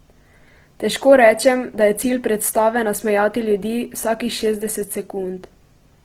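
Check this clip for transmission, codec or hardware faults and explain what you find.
One codec fault runs through the speech. Opus compression, throughout: likely a low-rate Opus encode in music mode around 16 kbps, rebuilding starved bands with folded or noise fill, so the speech sounds rough and grainy while still reaching about 20.2 kHz.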